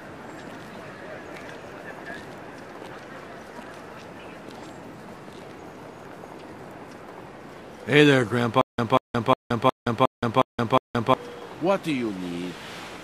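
From 8.61 s to 11.14 s the audio turns into a stutter with silent gaps: a short burst of about 189 ms plays, drops to silence for about 171 ms, then the same burst returns, repeating 7 times at an even period of about 361 ms. Whatever should have played across that span is missing. The likely cause is a player or stream stalling, replaying its last buffered fragment at each retry and then running dry before recovering.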